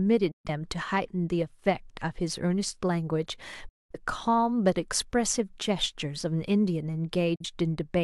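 At 0.31 to 0.50 s, 3.68 to 3.96 s and 7.35 to 7.45 s the speech cuts out. That's digital broadcast dropout: the receiver muted on bad frames, fading to silence in about 8 ms. The longest hole fits roughly five lost frames.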